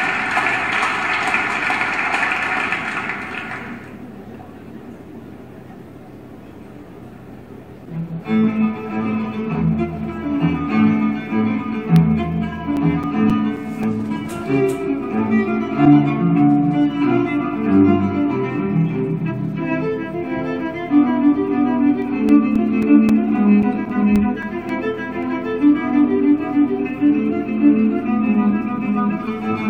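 Two bursts of CD scratch ticks, 11.96–14.63 s and 22.02–25.23 s, at about four a second. Each tick is a few milliseconds of sample damage where a scratch defeats error correction once per disc turn. They show as evenly spaced thin vertical lines on the spectrogram.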